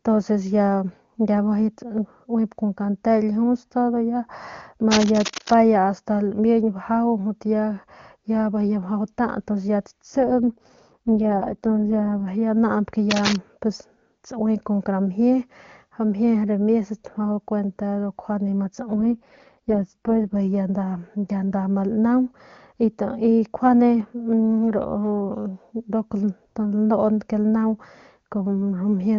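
From 4.91 to 5.55 s, and again from 13.11 to 13.36 s just after "naañp ke", cable scratch noise adds dense, uneven rustling, first slightly below the speech and then about as loud as it. This is likely a worn connector or cable being moved. Unlike a single click, the crackle is irregular and sustained.

From 10.2 to 12.28 s and from 18.93 to 20.35 s, an AMR rate drop makes the speech rough and synthetic, which fits a fall from 23.85 to 6.6 kbit/s. The bandwidth stays the same and there is no gap, which distinguishes it from narrowing or dropout.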